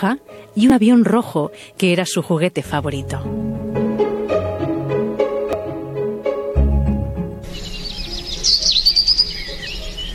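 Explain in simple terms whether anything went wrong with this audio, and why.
Damaged data in a compressed stream shows up as four very short glitches, at 0.70 s, 3.74 s, from 5.53 to 5.55 s, and at 8.43 s. Each is a brief chirp or blip. At those points some of the stored compressed data was corrupted, so the player couldn't read it properly. It lost its place for a moment and had to search ahead for the next readable chunk before the sound could carry on.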